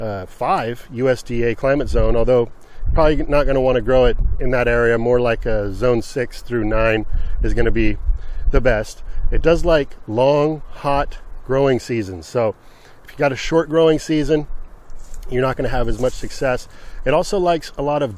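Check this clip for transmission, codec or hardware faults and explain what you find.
I found no faults in this clip.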